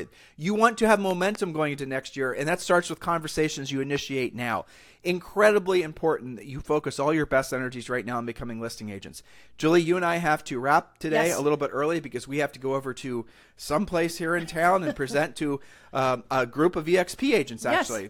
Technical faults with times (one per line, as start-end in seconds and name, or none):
1.11-1.37 loud pop
3.96-3.98 loud pop